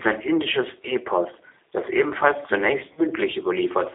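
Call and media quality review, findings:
G.729 codec, throughout: band limited to about 300 Hz to 3.7 kHz, rough synthetic texture, plainly audible damage. Consistent with 8 kbit/s G.729A coding, with speech rebuilt from a vocal tract filter, a pitch predictor and sparse pulses.

VoIP packet loss concealed by the speech codec, 2.93 to 3.07 s, after "das ebenfalls zunächst": speech smears into a fading buzzy tone or coloured noise, then recovers weak. Roughly 40 ms gap, fitting two 20 ms packets. The decoder extrapolates its last pitch and filter at decaying gain.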